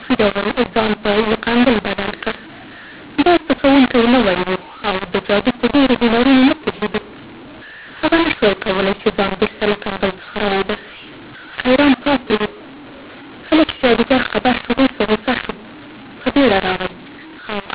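A speech clip over a G.711 telephone path, with mu-law and A-law mixed up from start to finish. The audio was coded with A-law but decoded as mu-law. The two logarithmic scales map each 8-bit code to different levels. So loud parts come out scrambled, some too large and others too small. The speech sounds harsh and gritty. The quietest samples are pushed well above silence, so pauses fill with hiss. The band stops at 4 kHz, as the 8 kHz telephone rate implies.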